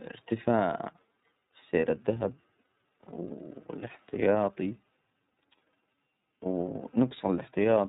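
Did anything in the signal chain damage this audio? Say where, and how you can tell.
Yes. The codec stage did. The iLBC codec removes everything above 4 kHz and makes the speech plainly rough and synthetic, consistent with its 13.33 kbps, 30 ms-frame mode.

At the network stage, lost iLBC frames cause a brief buzzy, held-vowel sound from 1.79 to 1.83 s. This fits one lost 30 ms frame, concealed by repeating the last pitch cycle.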